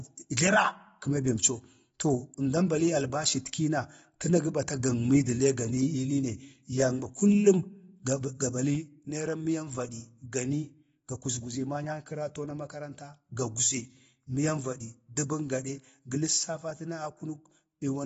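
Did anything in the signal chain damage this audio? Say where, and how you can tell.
Yes. At the codec stage, the speech was most likely encoded with AAC-LC at a low bitrate, consistent with roughly 24 kbps. Throughout, nothing reaches above about 7.6 kHz, so the top of the spectrum is simply gone and the sound is dull. The encoder is starved of bits, so it quantises coarsely against its hearing model. This leaves plainly audible codec damage, with a smeared, warbling texture on sustained sounds and fizz on sibilants.

A sudden gain jump occurs later in the chain. At 8.75 s the level drops by about 5 dB and stays there to the end, with the speech and the background noise falling together in a single step and no fade. That points to a digital gain change applied between one sample and the next without a ramp, likely a level setting or bit shift switched in mid-stream during processing or playback.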